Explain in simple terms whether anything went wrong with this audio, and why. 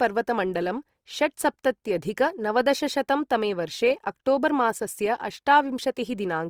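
Opus compression runs through the whole clip, making the speech sound rough, grainy and noisy. This is likely from squeezing the file too small: short of data, the encoder patched in noise instead of true detail, though the treble stays.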